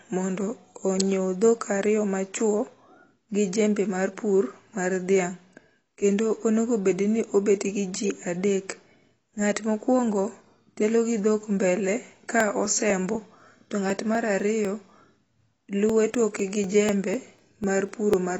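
The speech sounds dull and smeared from start to finish, with a watery, warbling texture on held sounds and fizzy, blurred sibilants. Nothing remains above 8 kHz. This is most likely AAC compression: the encoder has lowered its cut-off. The plainly audible damage suggests AAC-LC at a low rate, which fits a bitrate around 24 kbps.

From 12.15 s to 18.14 s a steady train of ticks runs under the speech, one every 0.249 s, about four per second. The ticks sound only while there is signal. These are periodic USB or driver dropouts. Something blocks the audio path at a fixed interval, and about a millisecond of audio is skipped each time, so the waveform jumps. That happens around thirty times.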